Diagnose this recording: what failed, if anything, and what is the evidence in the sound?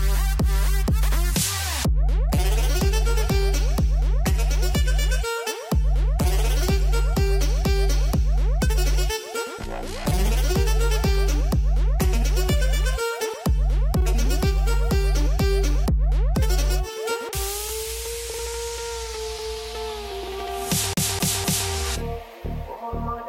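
Playback failed: the CD got stuck on one turn. From 20.93 to 21.70 s, the same 0.25 s of sound repeats three times, with a brief mute at each jump. A scratch kept throwing the laser back one track on every rotation.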